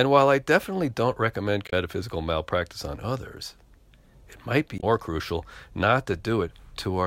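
Damaged data in a compressed stream at 1.66–1.73 s, after "I definitely don't recommend", and at 4.77–4.84 s, after "it might be": corrupted frames knock the decoder out of sync, producing a brief chirp, squawk, click or short gap while it searches for the next valid frame.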